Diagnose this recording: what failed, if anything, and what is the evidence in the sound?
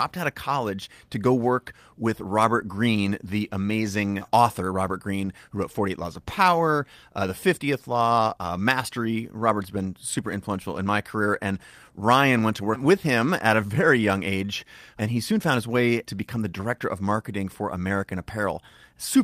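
Clock drift between sender and receiver, at the network jitter-buffer stage. The sender's clock runs roughly 5 percent fast, so the receiver's buffer keeps filling faster than it plays out. Small timing hiccups recur throughout the speech, at uneven intervals rather than a regular rate.

Repeated timing corrections run from 0.05 s to 19.18 s. To keep the buffer from overflowing, the receiver cuts short pieces of audio, all in the same direction, which holds playback at 105 percent speed. The cuts are small and unevenly spaced.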